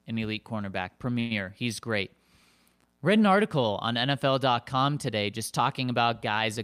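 At 1.19 s, right after "an elite cornerback", the speech stalls in a call audio freeze lasting until about 1.33 s. The last sound is stretched into a fading buzz for roughly 0.11 s, likely because packets arrived late and the jitter buffer ran dry. Unlike packet loss, nothing is cut out. The speech picks up exactly where it stopped, now running about 111 ms later than before.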